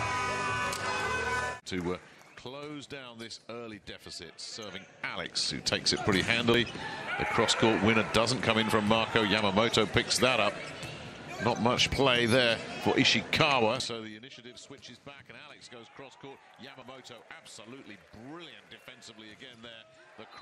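A small jump forward in the sound at 1.6 s, repeating at 6.54, 8.7, 11.92, 13.8 and 16.82 s, is likely a dropped buffer (overrun), with roughly 20 to 70 ms lost and the two sides spliced together. From 4.44 to 5.86 s, a ticking zipper noise rides on a level change of around 20 dB, applied in unsmoothed 2 dB steps about seven times per second.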